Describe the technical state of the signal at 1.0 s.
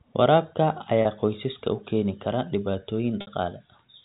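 At 1.02 to 1.05 s there is packet loss with pitch repetition. About 30 ms of audio drops out, which fits a single lost packet. The receiver repeats the last pitch period to fill the gap, so the voice briefly sounds held and buzzy just before "qoysaska u keeni kara".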